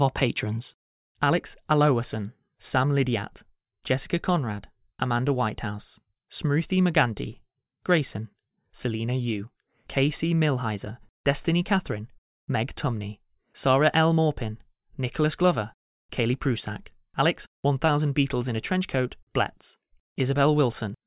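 No technical faults can be heard anywhere in the speech.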